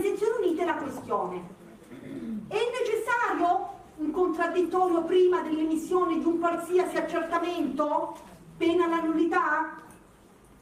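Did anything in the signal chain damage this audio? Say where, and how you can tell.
No, nothing along the chain seems to have left a mark on this audio, so there's no stage to point at and nothing to trace back.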